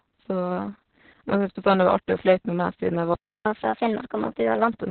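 From the start the speech carries heavy Opus voice compression: nothing above 4.3 kHz, so a spectrogram shows a hard ceiling there, with smeared, coarse harmonics beneath. It sounds muffled, hoarse and faintly robotic, consistent with SILK narrowband coding near 6 kbps.

At 3.14 s the sound cuts out mid-flow for 315 ms, until 3.46 s: a playback stall, most likely from the player running short of data or being blocked. The waveform drops to a flat line and the spectrogram shows a blank vertical gap.

From 3.46 s to 4.72 s comes catch-up at higher speed. The player rushes through its backlog at 1.25 times normal rate, which raises the pitch by roughly four semitones, giving a hurried, slightly chipmunk quality. On a spectrogram the harmonics sit higher and crowd closer in time, then settle back.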